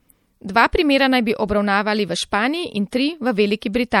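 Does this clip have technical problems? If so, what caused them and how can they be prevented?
Yes. Throughout, the speech sounds watery and swirly. The treble is cut off, and faint detail flickers in and out. S sounds carry metallic chirps, and consonant attacks smear. The damage is plainly audible. The likely cause is MP3 compression at a low bitrate, consistent with about 64 kbps. The encoder ran short of bits, dropped the top band, and zeroed weak frequency lines from frame to frame. Encoding at a higher bitrate, or keeping an uncompressed master, prevents this.

At 2.91 s there is pre-echo. A short hiss, about 16 ms long, arrives just before a sharp attack. That attack also sounds soft and blurred. This happens because the transform codec spreads its quantisation noise evenly across a whole block. Noise sized for the loud onset leaks into the quiet moment before it. An encoder with good block switching or a higher bitrate keeps attacks clean.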